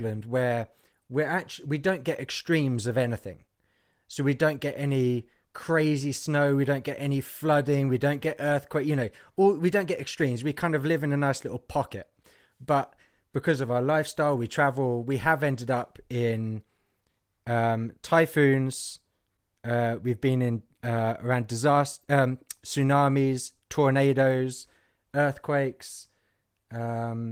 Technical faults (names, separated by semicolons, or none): none